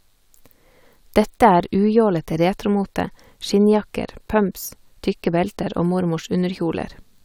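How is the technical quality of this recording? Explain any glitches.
No glitches or technical faults can be heard here.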